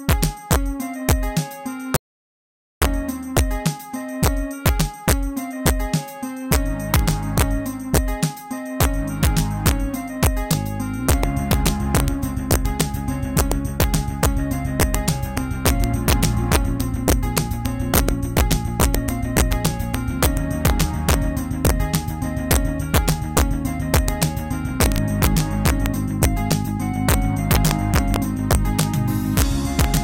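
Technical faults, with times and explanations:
Throughout, integer overflow: peaks pushed about 1 dB past the limit wrap to the opposite sign, giving sharp cracks on the loudest moments, harsher than the flattened tops of clipping.
1.96 to 2.82 s, audio dropout to silence: about 0.85 s of sound vanishes into silence with no room tone, unlike a quiet passage, likely from the input momentarily disconnecting.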